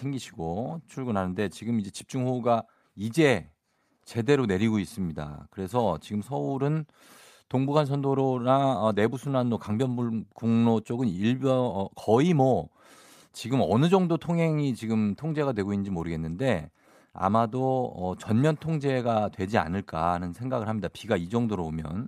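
Listening to this speech recording, nothing stood out as a technical problem at any point.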